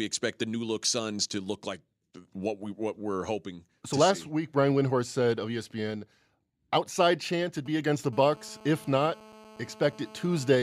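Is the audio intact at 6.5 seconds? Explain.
Yes, at 6.5 seconds the speech is intact, with no dropout, click, distortion or other fault at that point.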